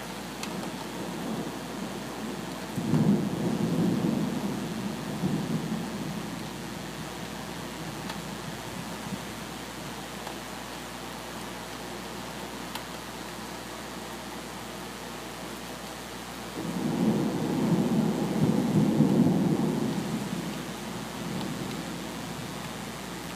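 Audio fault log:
throughout: mains buzz, a steady raspy buzz tied to a 60 Hz supply, sitting roughly 15 dB below the wanted sound and present for the whole clip. The rasp comes from sharp switching spikes leaking into the signal twice per mains cycle, typically via a dimmer, a rectifier or a missing shield. The spikes repeat at 120 per second and spread energy across many harmonics of 60 Hz, up into several kHz, which gives the buzz its edgy character rather than a pure hum.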